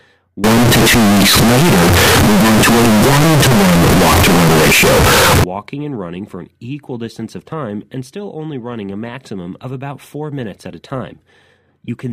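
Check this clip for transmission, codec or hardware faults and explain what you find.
One fault appears, a float read as integer, from 0.44 to 5.44 s, just before "and running for an". The speech turns extremely loud, harsh and buzzy, with background noise as loud as the talker, though pitch remains traceable. The likely cause is floating-point samples being read as integers, which fits 32-bit float data decoded as 32-bit integer, where sign and exponent bits drive the waveform to a near-square shape at an almost fixed, high level.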